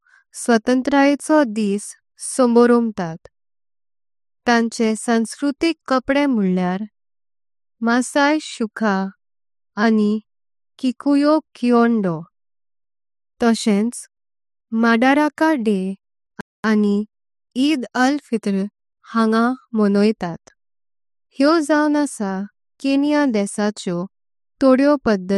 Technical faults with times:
16.41-16.64 playback stall

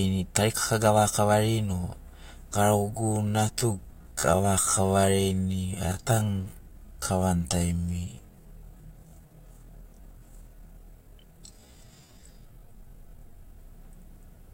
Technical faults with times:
2.91-13.59 time-stretched section

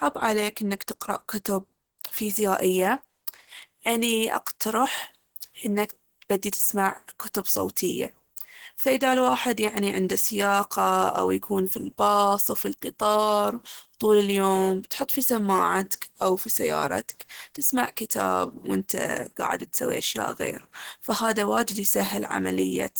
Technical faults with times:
0.00-22.99 Opus compression

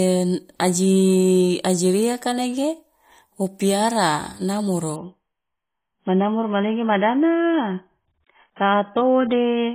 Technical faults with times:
4.96-9.75 adaptive stream at a lower bitrate

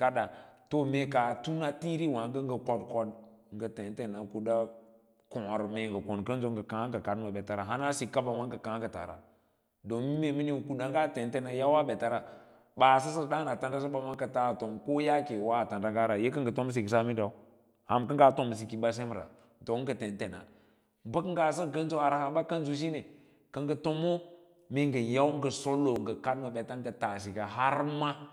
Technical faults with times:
14.14 dropped buffer (overrun)
25.96 dropped buffer (overrun)

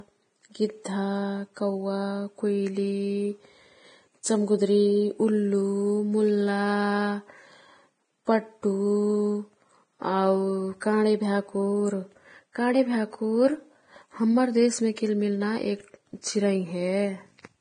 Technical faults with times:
0.00-17.61 Vorbis compression
0.84 pre-echo
4.23 pre-echo
10.80 pre-echo
14.96 pre-echo
16.21-16.23 pre-echo

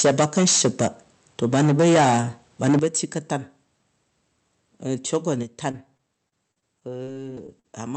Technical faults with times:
0.00-0.87 microphone overload
1.43-2.20 microphone overload
2.63-3.13 microphone overload
2.79 microphone volume stepped down
5.14-5.17 microphone overload
5.43 microphone volume stepped down
5.71-7.66 repeated packet loss (robotic sound)

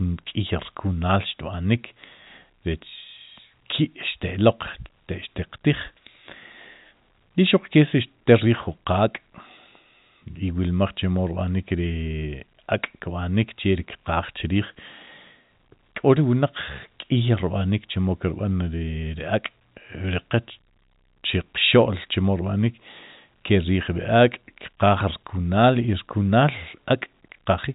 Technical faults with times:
none

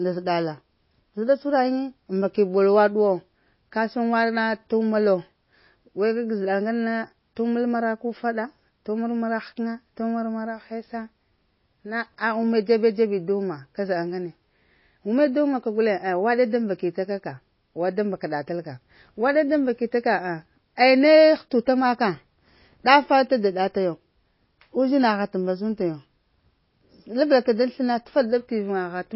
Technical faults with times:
0.00-29.15 MP3 compression

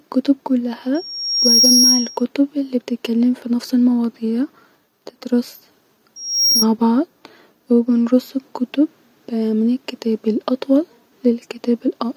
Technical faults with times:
0.94-2.25 loudspeaker feedback squeal
6.16-6.66 loudspeaker feedback squeal

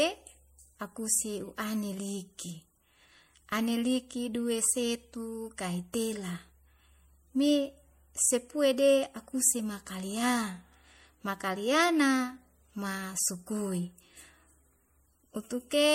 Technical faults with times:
0.00-15.94 MP3 compression

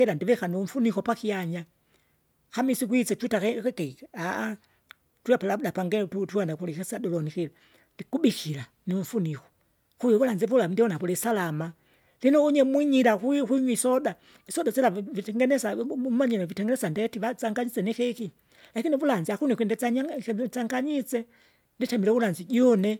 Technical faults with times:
none

